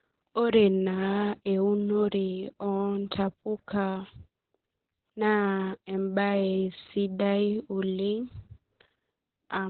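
Speech clip with heavy Opus voice compression throughout. Nothing survives above 4.3 kHz, so it sounds muffled, hoarse and slightly robotic, as if coded with SILK narrowband at around 8 kbps.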